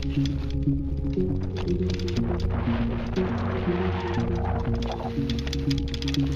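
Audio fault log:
No audible faults detected.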